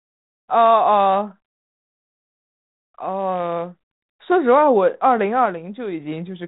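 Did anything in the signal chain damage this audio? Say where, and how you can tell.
No, nothing in the chain damaged this speech; the 32 kbit/s G.726 telephone path just caps the top end at about 3.8 kHz, leaving the narrow, phone-like sound you'd expect.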